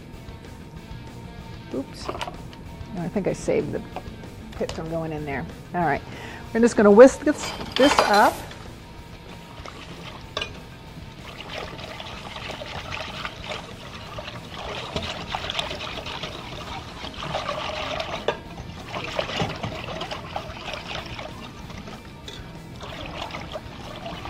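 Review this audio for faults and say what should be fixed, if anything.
No faults found; nothing needs fixing.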